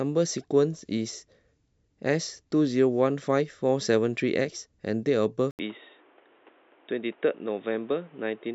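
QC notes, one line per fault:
5.51–8.55 s, input switched to a poorer device: after an 80 ms gap the speech turns dull and boxy, with nothing above 3.8 kHz, a drop of roughly 5 dB and a new noise floor roughly 30 dB down, likely a lower-grade microphone or headset call profile.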